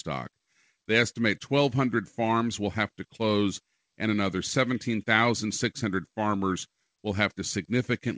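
Nothing goes wrong anywhere in this speech recording; it simply has the narrower sound you'd expect from a call codec, with nothing above 8 kHz.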